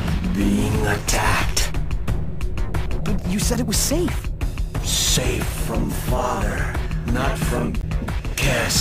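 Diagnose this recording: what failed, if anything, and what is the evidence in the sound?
Three short disturbances, heard as a chirp, squawk, click or brief hole, land at 0.98 s, 3.54 s and from 7.81 to 7.84 s. This is damaged data in a compressed stream, a fault at the codec, storage or transport stage. At each point some bytes of the encoded file were lost, zeroed, overwritten or mixed with foreign data. The decoder misread or rejected those frames and lost sync, then resumed at the next valid frame header.

A low thump at 1.23 s marks a DC step, with the offset gone by 3.22 s. The sound continues unchanged throughout. The fault sits at the converter or analogue input stage. The waveform's zero line jumped to a new level, as happens when a converter recalibrates or an input carrying an offset is switched into the path. That sudden shift in the baseline, rather than anything in the sound itself, produces the low thump.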